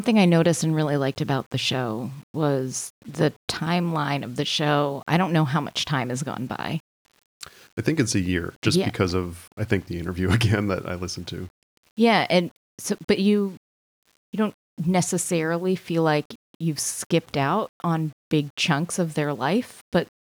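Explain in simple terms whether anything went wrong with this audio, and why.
Something did go wrong: the speech has a grainy roughness throughout, worst in quiet stretches and fading syllables, where it crackles or sputters. This is low bit depth without dither: the audio was likely rounded to 8 bits, snapping small details onto coarse steps.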